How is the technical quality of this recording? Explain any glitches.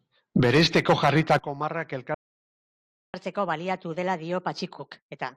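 The recording has two linked playback glitches from 2.14 s onward: the audio drops out, then rushes to make up the lost time.

Playback stall, 2.14 to 3.14 s. The speech cuts off mid-flow and the output goes completely silent for just under a second (0.99 s). The player most likely ran short of buffered data or had its audio thread blocked, so nothing reached the output until it recovered. The result is an abrupt gap rather than a fade or a crackle.

Catch-up at higher speed, from 3.14 s to the end of the clip. Once playback resumes, the player works through its backlog by resampling at 1.25 times normal speed. Because resampling shifts speed and pitch together, the speech sounds hurried and noticeably higher, by about four semitones, with a slightly chipmunk-like quality. The speed-up continues to the end of the clip, so the speech never returns to its natural rate or pitch.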